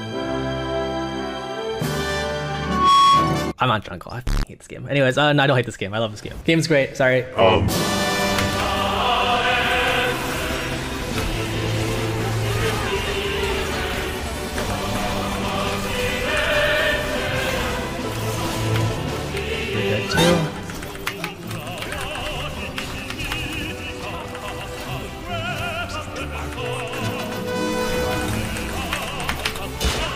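Loudspeaker feedback squeal runs from 2.62 to 3.54 s. A microphone is picking up the loudspeaker it drives, and at 1.1 kHz the loop returns more signal than it sends, so that frequency feeds itself on every pass. The tone swells out of the sound over roughly a third of a second into a piercing whistle, rising to around 10 dB above the surrounding audio, then stops.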